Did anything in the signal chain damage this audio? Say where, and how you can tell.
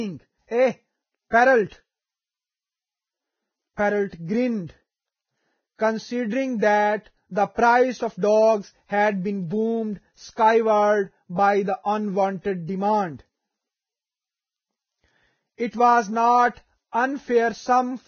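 Yes, at the codec. The speech is grainy throughout, with nothing above 6.5 kHz. Likely heavy Vorbis compression at a very low bitrate.

Pre-echo appears at 1.30 s and 16.92 s. A hiss of 30 and 22 ms precedes each attack. Block-wide quantisation noise fills the gap.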